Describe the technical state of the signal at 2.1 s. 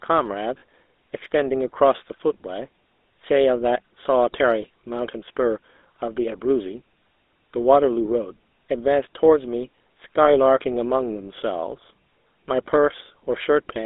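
At 2.1 s, as throughout, the speech has passed through the GSM full-rate codec, a vocal-tract model driven by sparse regular pulses at what sounds like roughly 13 kbps, with the band held to about 250 Hz to 3.7 kHz, leaving a plainly audible buzzy, gravelly roughness.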